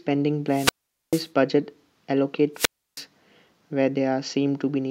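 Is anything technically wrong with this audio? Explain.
Yes. Wireless microphone squelch dropout occurs from 0.48 to 1.30 s, muting about 0.44 s, and from 2.54 to 3.04 s, muting about 0.32 s. The fading radio signal brings up hiss until the receiver's squelch cuts the output, which a plain digital dropout wouldn't do.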